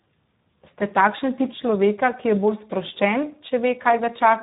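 Speech clip with heavy Speex codec damage throughout, sounding noisy and hoarse, consistent with roughly 8 kbps; a spectrogram shows nothing above 3.8 kHz.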